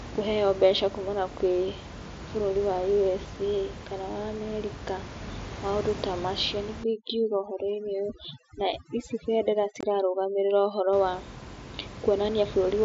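From 6.84 s to 10.93 s there's overdone noise removal. The suppressor is set so hard that the room noise, which sits about 13 dB under the speech, collapses into near silence with twinkly specks, and the voice's quieter bands get cut too.

Inside that stretch, at 9.81 to 9.83 s, you get unconcealed Bluetooth headset packet loss: a sharp-edged hole of about 22 ms with nothing filled in, which fits roughly three lost mSBC packets. The wideband mSBC link carrying the speech only adds light graininess.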